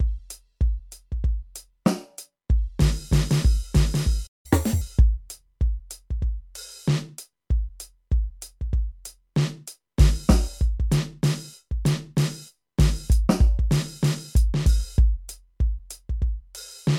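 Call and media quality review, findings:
Playback stall, 4.26 to 4.46 s: music cuts out mid-flow for about 0.18 s. Likely cause: player buffer underrun or a blocked audio thread, so output goes silent until recovery. Waveform: a flat gap. Spectrogram: a blank vertical band across all frequencies, with hard edges on both sides.

Catch-up at higher speed, 4.46 to 4.81 s: immediately after the stall, playback runs at 1.5x speed, pitch raised by roughly seven semitones. The player is resampling its backlog to recover lost time, then returns to normal rate. Spectrogram: harmonics shifted upward, events compressed in time.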